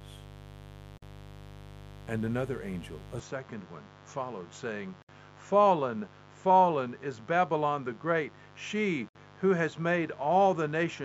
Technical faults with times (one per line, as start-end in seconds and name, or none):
0.00-11.04 mains buzz
0.98-1.02 gap at a join of encoded pieces
3.19-11.04 input switched to a poorer device
5.02-5.09 gap at a join of encoded pieces
9.09-9.15 gap at a join of encoded pieces